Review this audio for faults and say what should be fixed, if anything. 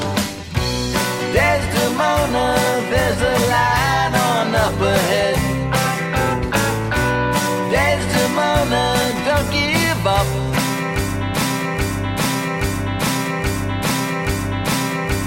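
Broken-record loop, 11.42 s to the end: playback likely stalled and resent its last fragment, so a 0.83 s piece repeats five times, replacing the audio.

To prevent it, add stall detection in the player or stream that drops to silence or reconnects instead of replaying the held buffer.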